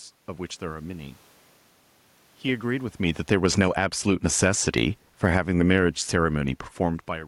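From 2.46 s the automatic gain control judges the input too loud and starts pulling its gain down, sinking the level by about 9 dB over the following seconds until 7.23 s. Because the gain is applied to everything at the microphone, the speech and the room noise behind it fade together, a slow drop rather than a step. The talker's own shift in distance around 3 s is layered on top of this descent.

Inside that fall, from 3.78 s to 5.02 s, the automatic gain control reverses and raises its gain by about 7 dB, as though it had briefly read the input as too quiet. Over those 1.2 seconds the voice and background swell together, lifting the level partway back before the downward drift resumes. A second change in the talker's distance comes near 6.5 s, late in the decline.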